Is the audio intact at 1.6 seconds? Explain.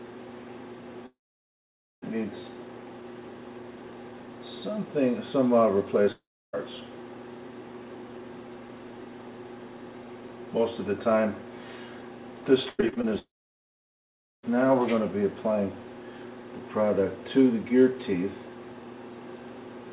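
No. From 1.06 to 2.04 s there is a gap, likely a long network dropout: the last sound smears into a brief fading buzz, then about 0.88 s of silence covers 1.6 s. On a waveform this is a flat line; a spectrogram shows a blank band.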